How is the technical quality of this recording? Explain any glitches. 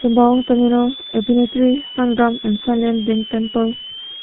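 Pretty rough. There are two problems, and both run through the whole clip.

First, a switching supply whistle. A high tone sits around 3 kHz and wanders between roughly 2.9 and 3.5 kHz. It's loud, only about 15 dB below the speech. That's what a switching power supply does when it drops into a burst mode within audible range, or when two supplies beat against each other. The pitch shifts as the load on the supply changes, and that's why the whistle drifts.

Second, the G.723.1 codec, and it's heavily damaged here. Nothing gets through above about 3.8 kHz, so the speech sounds muffled and boxy. On top of that there's a hoarse, grainy quality and smeared consonants, which fits a very low rate of around 6 kbit/s. This codec works in 30 ms frames and updates its model of the voice slowly, so quick changes between sounds get blurred together and fine detail is thrown away.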